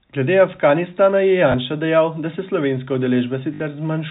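Speech, with packet loss with last packet repeated: a small blip at 1.52–1.54 s before "dejal da se", then a 50 Hz buzz from 3.54 to 3.60 s, repeated sound rather than a silent dropout.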